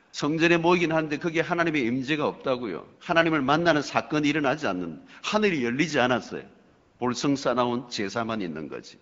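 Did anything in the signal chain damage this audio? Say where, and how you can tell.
Yes, and it's in the call processing, specifically AMR comfort noise from the phone's silence handling. Listen at 0.09 to 0.13 s and again from 6.67 to 6.99 s: the real background drops out and a smooth, steady hiss takes its place, switching in and out, about 40 ms the first time and 320 ms the second. The sender decided nobody was talking and stopped sending speech frames, so the receiver synthesised filler noise from a rough level-and-spectrum sketch. The underlying codec, which sounds like AMR-WB at around 12.65 kbit/s, is only lightly coloured.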